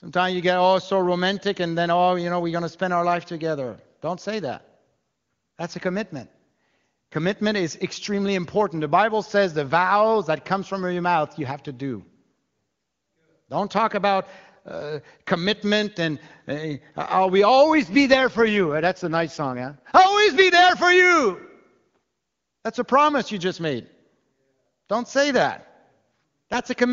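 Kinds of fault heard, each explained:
AMR rate drop: the wideband speech codec steps down to a lower mode with no gap and unchanged bandwidth. From 17.74 to 19.99 s, after "I'll we" and before "always be there for", speech turns rough and synthetic, consistent with 23.85 falling to 8.85 kbit/s.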